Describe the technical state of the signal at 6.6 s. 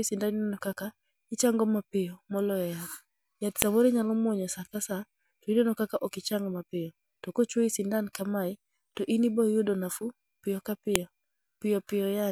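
At 6.6 s the speech signal is intact, with no audible fault at that moment.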